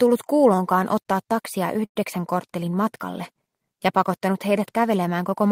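At 1.85 s a call audio freeze stretches the last sound into a fading buzz, then 80 ms of silence, before the audio resumes at 1.98 s, 102 ms late, likely from a jitter buffer running empty. Spectrogram: smeared horizontal streaks, then a blank band. Waveform: decaying, then flat.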